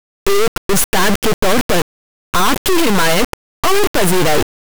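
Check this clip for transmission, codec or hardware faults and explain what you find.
One fault affects the speech from start to finish. Integer read as float, throughout: 32-bit integer samples decoded as 32-bit floats become near-zero or huge values, producing a loud square-wave buzz that falls silent in quiet stretches.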